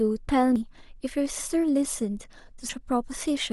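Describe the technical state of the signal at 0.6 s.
At 0.56 s the speech jumps abruptly, skipping roughly a tenth of a second of sound. This is most likely a dropped buffer (overrun): the recording software failed to collect a block of samples before the hardware overwrote it, so the audio on either side is joined directly. Unlike a dropout, there is no gap of silence. The sound simply leaps forward at the join.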